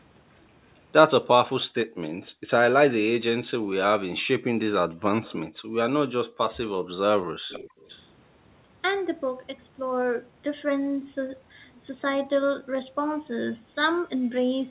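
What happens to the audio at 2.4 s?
At 2.4 s the room background is gated by the echo canceller: between 1.86 and 2.50 s it ducks the microphone by up to about 40 dB, for roughly a third of a second in total. The room sound drops away and returns when the canceller lets go, with no repeated fragment as a packet-loss dropout would leave.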